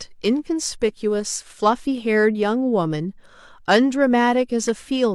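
No technical faults can be heard anywhere in the recording.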